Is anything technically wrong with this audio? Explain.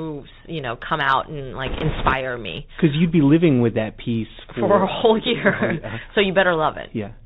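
Yes, there are two faults. Throughout, the speech sounds narrow and muffled, with a granular hiss underneath, scratchy s sounds and roughness on loud bright passages. This is the Bluetooth CVSD headset codec, whose one-bit up-or-down steps, consistent with a 64 kbps stream, cut everything above 4 kHz and can't keep up with fast loud changes.

From 1.66 to 2.13 s, a rushing, crackly noise rides over the speech, without sharp clicks. These are bit errors on a Bluetooth voice link, affecting roughly one bit in twenty. Because each CVSD bit carries only a small step, the errors smear into noise rather than producing loud pops.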